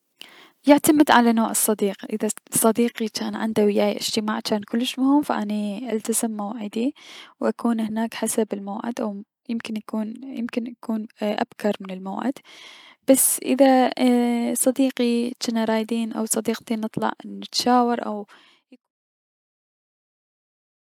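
The speech signal holds a steady, intact level until it eases down in a smooth fade-out that begins around 17.5 s and reaches silence at 18.92 s.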